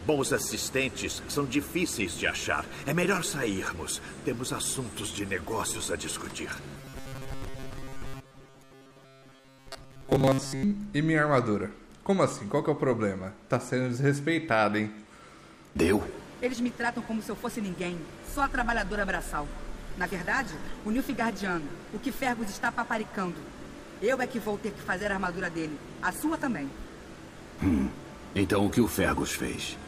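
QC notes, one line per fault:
6.77–10.63 s, robotic sound from repeated short buffers: new audio likely arrived too seldom, so roughly 7.5 ms slices were replayed in place of most of the real signal, stamping a rigid 134 Hz metallic buzz over the sound while it still loosely tracks the original.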